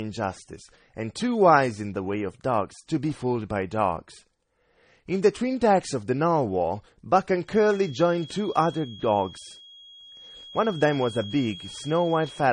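A speech recording that has been through more than one lossy codec. Nothing is heard above 9.8 kHz, and two kinds of smearing and swirl sit on top of each other. That points to transcoding between lossy codecs, likely a low-rate AAC pass re-encoded as low-rate MP3. From 7.42 s to the end, a thin, steady tone at 3.3 kHz hangs behind the speech. It sits roughly 20 dB down and swells and fades slowly in level. This is a feedback whistle, likely a loudspeaker-to-microphone loop held just short of runaway.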